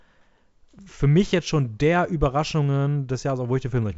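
No technical faults are audible in this speech, which comes over the G.722 wideband telephone link at 64 kbit/s with nothing above about 7.7 kHz.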